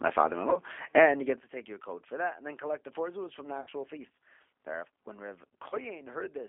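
G.729 codec damage runs through the whole clip: the speech is squeezed into a 300 Hz to 3.4 kHz line band and rebuilt from a filter, pitch predictor and sparse pulses, which fits an 8 kbit/s G.729A stream. The result sounds plainly rough, thin and synthetic.

VoIP packet loss concealed by the speech codec occurs at 0.50 to 0.59 s, 3.61 to 3.69 s just after "four zuz from the", and 5.69 to 5.77 s. At each point, about 30 ms of audio goes missing, or 60 ms at 3.61 s, which fits one lost packet at the first and third points and two at the second. The decoder fills each gap by stretching its last pitch and filter into a buzzy tone or coloured noise that fades. The sound stays weak and distorted briefly after it resumes.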